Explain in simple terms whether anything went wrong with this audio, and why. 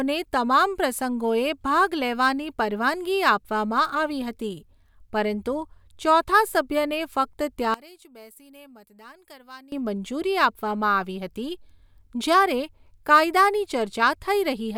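Between 7.74 and 9.72 seconds the speech suddenly drops away and turns faint. The likely cause is one channel inverted. One stereo side was flipped upside down. When both sides are combined, the centred voice cancels itself out and almost disappears.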